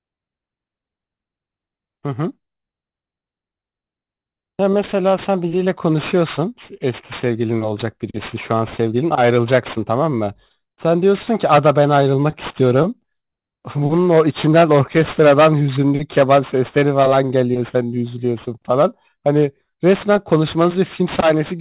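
Aliasing runs through the whole of this speech clip: the audio was downsampled without an adequate anti-aliasing filter, so energy above the 4 kHz fold mirrors back as gritty, metallic sibilance roughly 20 dB below the speech, which fits a drop to an 8 kHz rate.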